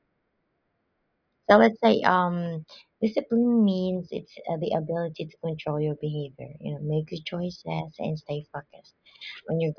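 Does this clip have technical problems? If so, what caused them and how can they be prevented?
No, this clip has no technical problems, so there is nothing to trace to a cause or prevent.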